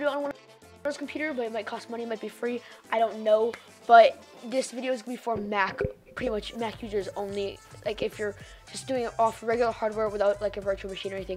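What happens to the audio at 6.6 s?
Nothing goes wrong at 6.6 s; the audio there plays through intact, with no dropout, click or other fault.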